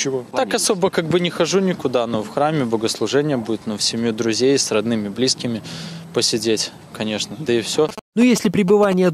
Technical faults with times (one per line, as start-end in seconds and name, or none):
7.89-8.94 GSM signalling bursts